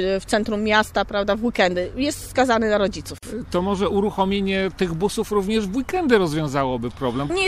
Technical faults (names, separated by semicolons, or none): gap at a join of encoded pieces